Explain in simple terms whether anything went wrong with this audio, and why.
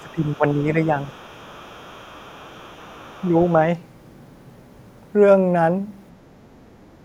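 Two things went wrong. From 0.00 to 0.39 s and again from 1.03 to 3.53 s, the other side's voice is leaking through faintly. This is likely echo the canceller failed to remove. From 0.00 to 0.91 s, the talker's speech is suppressed in double talk. The voice dips in places, likely because both sides spoke at once.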